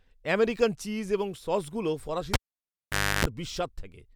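At 2.34 s, after "আমেরিকান চিজ এবং সসগুলো", the cable is pulled and plugged in. A pop, about 0.87 s of near silence, 0.31 s of 50 Hz buzz, then a pop at 3.25 s.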